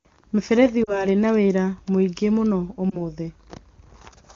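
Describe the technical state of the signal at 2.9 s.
Right around there, from about 2.90 to 3.02 s, you get a lost AMR speech frame. It sounds like a single 20 ms frame failed its checksum after radio errors. The decoder covered the gap by reusing the last good pitch and vocal tract settings at reduced gain, so you hear a quick dip or warble before things pick up again. The surrounding wideband coding is clean, consistent with AMR-WB at its top rate.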